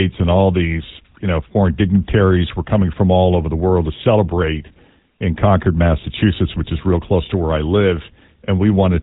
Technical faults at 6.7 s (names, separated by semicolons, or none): GSM full-rate codec